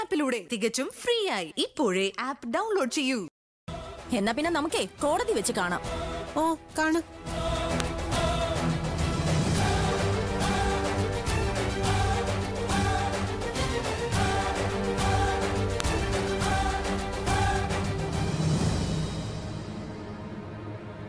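Two sharp clicks land at 7.80 and 15.80 s, eight seconds apart: a file header played as audio, where joined pieces kept their header bytes, which play as a brief snap.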